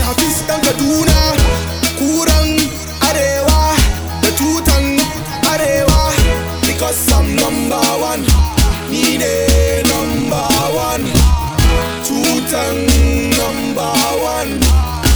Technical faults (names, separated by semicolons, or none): time-stretched section